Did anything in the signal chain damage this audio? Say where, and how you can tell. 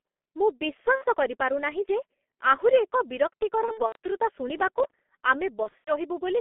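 Yes, two stages. First, the codec: the whole clip has gone through G.723.1, and heavily. The band stops at about 200 Hz at the bottom and 3.4 kHz at the top, so it sounds boxed-in and dull. The voice has that hoarse, smeared quality you get when a codec tracks the vocal tract only once per 30 ms frame, which blurs consonants. The thinness fits a rate around 6.3 kbit/s.

Second, the network: there's VoIP packet loss concealed by the speech codec in three places. The first runs from 0.96 to 1.06 s and is short, roughly 60 ms of missing audio. The others are from 3.66 to 3.96 s and from 5.63 to 5.92 s, where the losses are scattered over about a quarter to a third of a second, with gaps up to 90 ms. In each, the decoder keeps repeating its last pitch and filter at falling gain, so you hear a stretched buzzy tone or coloured noise fading out. The voice stays weak or distorted until the decoder catches up.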